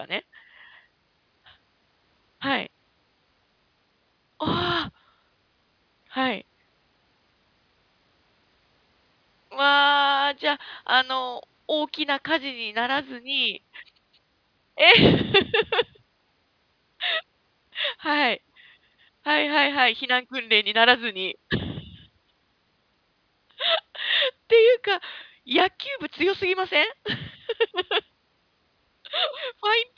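No faults are audible anywhere in this recording.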